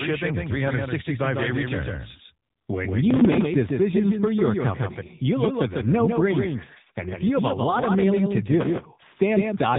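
Throughout the speech, a doubled audio track trails the original by about 150 ms, roughly 5 dB quieter, most likely from a second, slower capture path. Unlike reverb, the copy is dry and full-band, with no decay.

The whole clip also carries AMR narrowband mobile codec damage. Nothing passes above 3.8 kHz, and the voice turns buzzy and synthetic, which points to a low-bitrate AMR-NB mode near 8 kbps. Plain band-limiting would only sound muffled, not artificial.

From 3.11 to 3.46 s, just before "decisions for your company", and again from 8.61 to 8.85 s, right after "lot of mailing to", processor overload crackle breaks out. Missed deadlines replay hard-edged scraps of old audio, consistent with a roughly 3 ms buffer, and the gritty tearing stops once the load passes, unlike the steady codec buzz.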